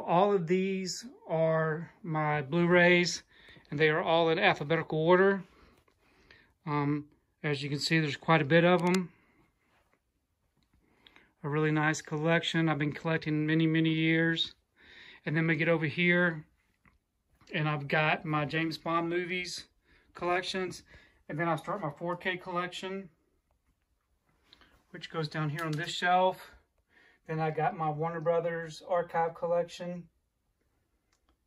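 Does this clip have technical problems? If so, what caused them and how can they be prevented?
Yes. From 8.79 to 8.97 s there is a short burst of cable scratch noise, a dense, uneven crackle and rustle lasting under 0.2 s and sitting roughly 15 dB below the main signal. The likely cause is a worn cable, connector or control being moved, so its contact resistance jumps around and injects erratic noise into the signal path. To prevent it, replace or clean worn cables and connectors, and secure them so they cannot shift during recording.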